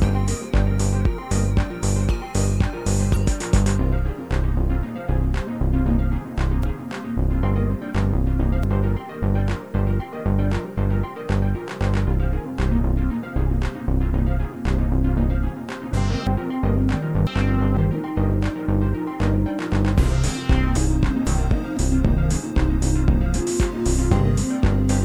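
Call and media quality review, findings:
Low bit depth without dither, throughout: grainy distortion on quiet passages, noise about 40 dB below signal; likely truncation to around 9 bits, error tracking the signal.

Damaged data in a compressed stream, 3.12–3.17 s and 15.90–15.94 s: brief disruption; decoder misreads corrupted frames, loses sync, resumes at next frame header.

Chunks out of order, 6.63–8.63 s, 16.27–17.77 s, 20.77–21.77 s: jumbled passages; 500 ms chunks played three, two and one chunk late respectively, three hard joins each.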